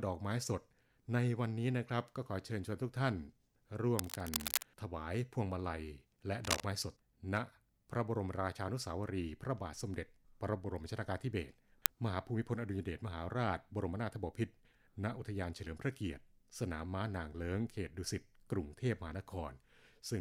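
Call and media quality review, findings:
Cable scratch noise, 3.98–4.65 s and 6.44–6.64 s: dense, uneven scratching bursts at roughly the level of the speech. Likely a worn cable or connector being moved, with contact resistance fluctuating.

Uninitialised buffer, 11.86 s: very short, loud crack lasting about 1.5 ms, which fits a 64-sample block. Playback read the buffer before audio was written, so stale memory was output as samples.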